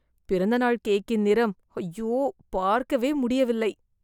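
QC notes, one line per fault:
No technical faults can be heard in the signal at any point.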